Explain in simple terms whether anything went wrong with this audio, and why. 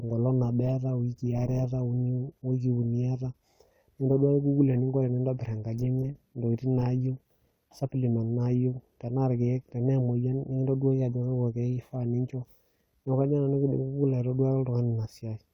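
Nothing went wrong with this audio, because no technical faults can be heard anywhere in it.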